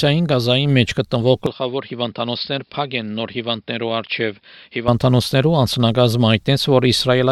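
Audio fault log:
1.46 to 4.88 s, input switched to a poorer device: sound turns dull and about 10 dB quieter, with nothing above 5.3 kHz and faint new background noise, likely from a switch to another microphone.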